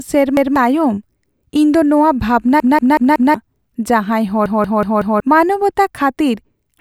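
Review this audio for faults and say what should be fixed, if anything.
Repeated buffer at 0.37–0.56 s, 2.60–3.34 s and 4.46–5.20 s: a 186 ms speech chunk, consistent with an 8192-sample buffer, replays once, then four times twice, with hard joins, losing roughly 0.2 s and 0.7 s of speech. Prevent it by keeping the output buffer fed through larger queueing or higher priority for the audio thread.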